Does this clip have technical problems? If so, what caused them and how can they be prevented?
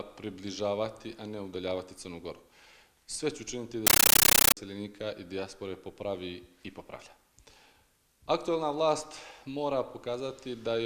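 Yes. From 3.87 to 4.57 s, a compressed stream played as audio replaces the sound with loud static. Undecoded Dolby Digital frames each play as a 13.3 ms noise burst, then padding, 31.25 times a second. That regular chatter sets it apart from random digital noise. Setting the source to output decoded PCM, or the receiver to decode the bitstream, prevents it.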